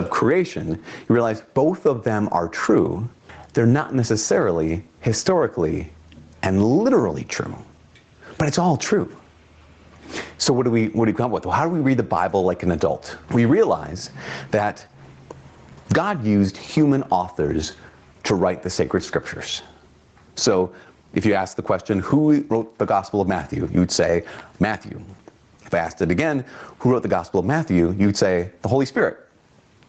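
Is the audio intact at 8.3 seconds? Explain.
No. At 8.3 seconds, as throughout the clip, there is gain pumping, a gain swing of around 20 dB. The likely cause is gain set far too high, with a fast limiter clamping every peak and squashing the dynamics.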